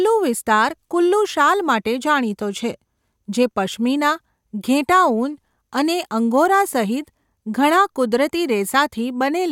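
No technical faults can be heard anywhere in this speech recording. There is nothing to place on a timeline, as no fault occurs at any point.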